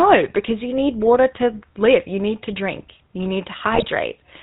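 From start to finish the speech has that GSM full-rate codec character, and it's plainly audible. The codec rebuilds the voice from a vocal-tract filter driven by a sparse train of regular pulses, so the sound comes out buzzy and gravelly, with nothing above 4 kHz. That dull, rough quality fits the old 13 kbps full-rate stream.

Then, from about 3.72 to 3.88 s, you get GSM bit errors. Corrupted bits reached the decoder and scrambled the filter, pitch and gain values it uses to rebuild each frame. For roughly 160 ms the voice breaks into squawky, gargling noise with level jumps, instead of just sounding rough. That stretch spans about eight 20 ms codec frames, and its density points to an error rate of a few percent on a weak link.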